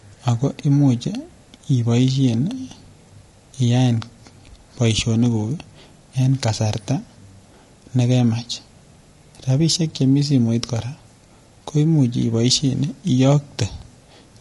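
Low-delay AAC compression runs throughout the speech, from start to finish. The damage is plainly audible: the voice sounds rough and grainy. The likely cause is AAC-ELD, the low-delay codec used for video calls, at a rate that fits roughly 32 kbps. It codes about 500 frequency lines a frame with a low-delay window. At this modest bitrate, the gaps between harmonics fill with noise, which smears the voice's tonal structure into a coarse texture.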